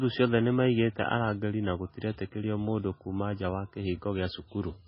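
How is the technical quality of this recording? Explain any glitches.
The recording's quality is poor, with heavy compression damage throughout the speech. The most likely cause is MP3 compression, which runs the whole length of the clip. The content above 5.5 kHz is missing entirely, a hard treble cut-off that fits a very low bitrate of around 16 kbps. At that rate the encoder discards weak frequency lines, which flicker in and out between frames and leave the speech sounding watery and swirly, with chirpy, metallic sibilants and smeared consonant attacks. On a spectrogram this appears as a flat ceiling at 5.5 kHz with empty space above it and patchy, blocky holes below it.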